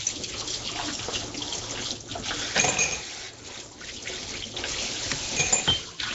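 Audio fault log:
Throughout, Nellymoser compression: a rough, hissy halo and smeared, underwater blur sit on the sound, with nothing above 7.7 kHz. This likely comes from the Nellymoser Asao codec at a rate near 32 kbps, where a fixed two bits per sample starve weak bands, which are then replaced with noise.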